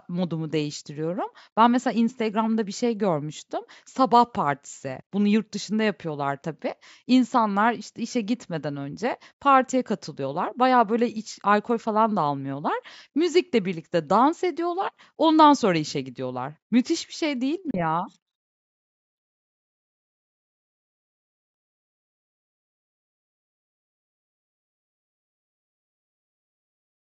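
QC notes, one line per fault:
17.71 to 17.82 s, Bluetooth dropout: speech cuts abruptly to silence, then resumes further along, likely because a couple of packets didn't reach the headphones in time.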